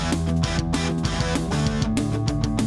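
From start to end the sound runs 1.5 times too fast and about seven semitones high, a wrong sample rate that fits 16 kHz audio played at 24 kHz.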